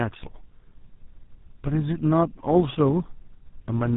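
Tandem speech coding runs through the whole clip. The sound points to three passes through a GSM full rate coder, at about 13 kbit/s, with plain telephone-rate links between them, so the speech was decoded and re-encoded at each handover. Every GSM stage models the previous stage's errors as if they were speech, compounding them into a rough, noisy, warbling texture. With nothing above 3.8 kHz, it also sounds muffled.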